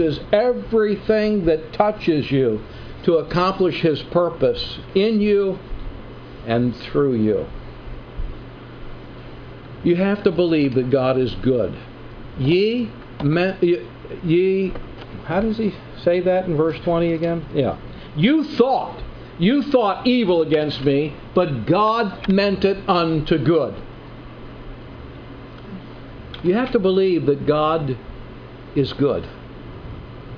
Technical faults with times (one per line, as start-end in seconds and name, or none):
none